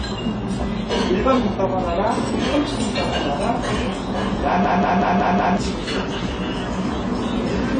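Throughout the clip there is damage typical of AAC compression: nothing sounds above about 9.7 kHz, and the sound is dull and smeared with a fizzy, warbling texture. The likely cause is AAC-LC encoding at a low bitrate, around 24 kbps, starving its frequency lines.

From 4.64 to 5.57 s a system hang loop takes over. The driver froze while the hardware kept replaying one 186 ms chunk, which fits an 8192-sample buffer, five times at 5.38 Hz. It is a machine-gun stutter, and about a second of sound is lost.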